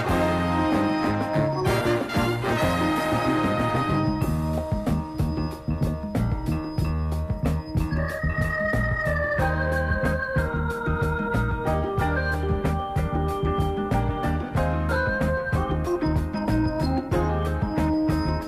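No audible technical faults are present in this recording.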